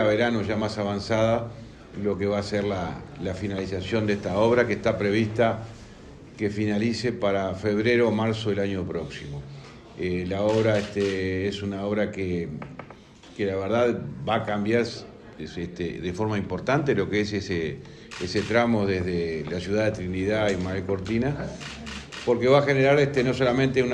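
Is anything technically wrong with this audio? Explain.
No, nothing technically wrong can be heard in this recording, so there is no fault to report.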